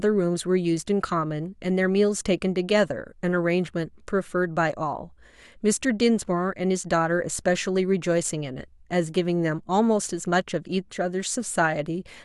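No technical faults can be heard anywhere in this speech recording. Nothing in the playback breaks, jumps or drops out at any point.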